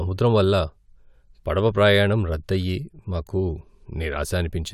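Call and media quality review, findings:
No faults found in this speech recording. No component flagged and nothing to escalate.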